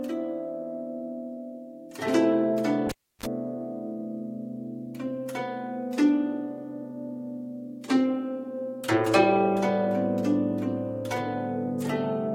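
At 2.89 s a sharp pop cuts the sound to near silence for about 312 ms. A short burst of 50 Hz mains buzz lasting roughly 40 ms follows, and a second pop brings the audio back at 3.26 s. This is a cable pulled and plugged in: the live lead was yanked out and pushed back, and the buzz is the moment only the plug tip touched the socket before the connection fully seated.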